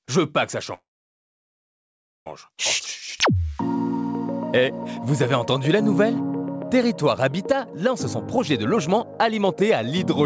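The audio passed through a call path that leaves nothing above 8 kHz, which fits a wideband codec such as G.722. From 0.74 to 2.27 s there is a call audio freeze. A brief fading tail gives way to about 1.4 s of near silence, and the sound then resumes exactly where it stopped. That points to a jitter buffer that likely ran empty while packets were held up. It differs from a dropout because nothing is lost, and about 1.5 s of delay is added instead. From 8.38 s to the end at 10.25 s, a jitter buffer speed-up plays the sound about 14% fast. Roughly 0.3 s is trimmed in small pitch-period pieces, so it sounds hurried while the pitch stays put, unlike a resampling speed change, which would raise it.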